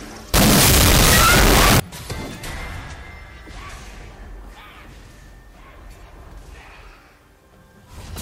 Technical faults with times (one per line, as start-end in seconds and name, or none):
0.34-1.80 signed and unsigned mixed up